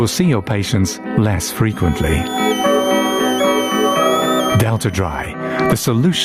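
Gain pumping runs through the whole clip. The cause is likely input gain set far too high, with a fast limiter or compressor clamping down on each loud sound. The result is audible: the level ducks under each loud moment, a swing of roughly 20 dB. Loud and quiet passages sit close together in level, and the overall sound feels squashed and breathing.

From 1.69 s to 5.26 s a switching supply whistle joins in. A switching power supply is running in an audible burst mode or beating against another supply, and its tone leaks into the audio. It sounds like a thin, high whistle near 3 kHz, drifting between about 2.8 kHz and 3.6 kHz as the load shifts, sitting around 30 dB below the main sound.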